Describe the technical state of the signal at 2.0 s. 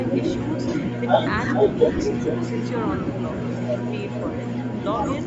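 Right around 2.0 s you're inside an echo leak running from 1.54 to 2.49 s. A second copy of the speech trails the original by roughly 440 ms, and it's about as loud as the direct sound, so the two overlap into a doubled, smeary patch. The likely cause is a far end on loudspeaker whose echo canceller didn't fully scrub what its mic picked back up, so that residue got sent straight back down the line.

There's also a single lost LE Audio frame at 1.99 s, just before the moment you asked about. That's one dropout of about 7.5 ms. The LC3 decoder covers it by reusing the previous frame's spectrum with its signs scrambled, so instead of a clean gap you get a tiny noisy smudge. It's very short, and it lands in the middle of the echoed stretch.

Underneath both of those, the whole clip carries plainly audible Bluetooth LC3 compression, which gives the speech a grainy, breathy edge in the upper range where the codec has swapped real detail for filled-in noise. 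The sound points to 7.5 ms frames and fits a bitrate around 48 kbps, likely a low enough setting for those artefacts to come through. The band stops at 8 kHz, which is just the call path's normal limit.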